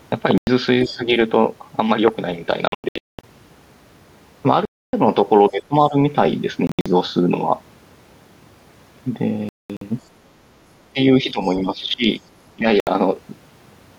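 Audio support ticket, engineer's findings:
Bluetooth dropout, likely packets late to the headset and discarded. Output goes silent, then speech resumes further on, as if it had kept playing. Holes at 0.38–0.47 s (93 ms), 2.68–3.24 s (441 ms lost in scattered gaps, longest 209 ms), 4.65–4.93 s (279 ms), 6.67–6.86 s (139 ms in gaps, longest 70 ms), 9.49–9.82 s (255 ms, longest 209 ms), 12.80–12.87 s (70 ms).

Other side's voice leaking through, likely residual echo left by the canceller on the talker's loudspeaker path into the mic. A faint second voice, about 30 dB under the talker, comes through as brief scraps at 0.83–0.93 s and 11.43–11.57 s. Both moments sit against or right beside double-talk suppression, where the canceller is already struggling to separate the two signals.

Speech suppressed in double talk, likely the echo canceller unable to tell the near talker from loudspeaker echo while both sides speak, so it ducks everything. 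Talker's level dips in pieces. At 0.86–1.03 s, about 10 dB down. At 5.50–5.96 s, deepest, about 20 dB. At 10.93–11.00 s, about 15 dB. At 11.22–11.40 s, about 10 dB. At 11.60–12.05 s and 12.56–12.66 s, about 15 dB.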